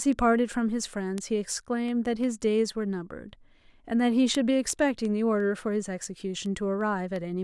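From 0.13 s to 7.16 s the speech carries word clock ticks: sharp clicks of uneven strength roughly every 0.4 s, about twenty in all. The receiver's clock drifts against the sender's by something like 100 ppm, so one sample slips each time. Spectrograms show thin, evenly spaced vertical broadband lines; the waveform shows step discontinuities.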